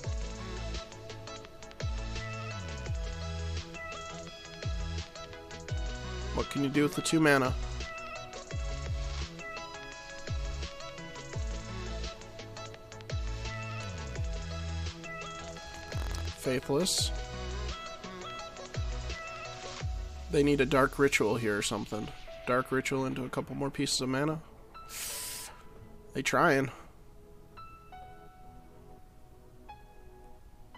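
From 15.46 to 16.27 s, buffer tearing produces a 43.1 Hz robotic buzz. A small sliver of audio about 50 ms stale is spliced into each period, which fits a 1024-sample buffer.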